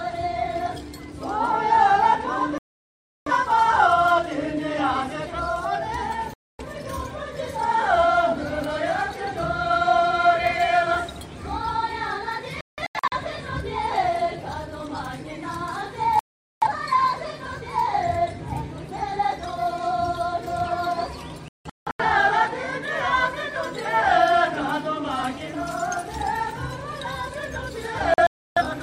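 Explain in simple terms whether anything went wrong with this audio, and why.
Digital broadcast dropout hits six times: at 2.58, 6.34, 12.61, 16.19, 21.48 and 28.14 seconds. Each time, the receiver stopped getting clean digital data and muted until good data returned. The gaps last between about a quarter and two-thirds of a second. At 12.61, 21.48 and 28.14 the silence breaks into several short holes rather than one. Whatever was broadcast during those moments is simply gone.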